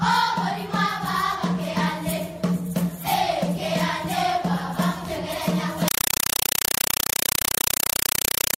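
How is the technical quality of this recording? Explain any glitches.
Quality collapses near the end. From 5.88 s to 8.58 s, a compressed stream played as audio replaces the sound: undecoded AC-3 data, likely at 256 kbps, arrives as 5.33 ms noise bursts repeating 31.25 times a second. It sounds like loud chattering static. The waveform shows dense blocks separated by flat silence; the spectrogram shows broadband vertical stripes.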